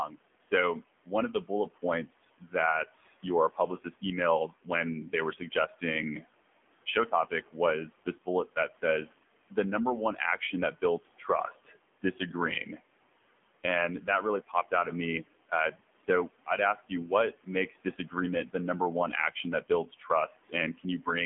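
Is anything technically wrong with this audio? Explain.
Yes. Three faults are audible.

Noise suppressor artifacts run through the whole clip. A suppressor estimates the steady background and turns those frequency bands down frame by frame, here by about 17 dB. The room noise, which sits about 20 dB below the speech, drops away in the pauses and swells back under the speech.

The AMR narrowband mobile codec also affects the entire recording. This 2G/3G speech codec rebuilds speech from a vocal-tract model driven by a few pulses per frame. Its audible damage points to a low bitrate mode around 7.4 kbps. Nothing above 3.7 kHz survives, and the band feels like a 200 Hz to 3.4 kHz phone line. The speech sounds buzzy and synthetic, and the residual noise swirls.

Speech cut by the noise suppressor occurs in two stretches, from 0.08 to 12.8 s and from 14.07 to 21.07 s. The suppressor mistook parts of the speech for background and attenuated them, by up to about 16 dB in the first stretch and about 15 dB in the second. 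This affects roughly a second of material in the first stretch and about half a second in the second, leaving soft consonants and word endings swallowed or faint.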